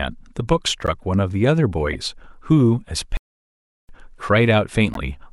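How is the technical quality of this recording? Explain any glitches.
The speech is marred by three short decoding blips and one obvious dropout.

Corrupt frame decoded at 0.86–0.90 s, 1.93–1.95 s and 4.93–4.97 s: damaged compressed frames got played anyway, so misread gains and codes threw energy into the wrong frequencies. Each blip lasts about one frame, the first maybe two, and is heard as a brief glitch. The first is loudest, peaking around -5 dBFS. The last is near -10 dBFS and the middle one quieter, around -15 dBFS.

Playback stall from 3.17 to 3.89 s: the audio cuts to silence mid-flow for about 720 ms, then picks up again. That's most likely the player starving for data or its thread getting blocked, leaving nothing to output until it recovered. It's long enough to hear as a clear hiccup in the speech rather than a click.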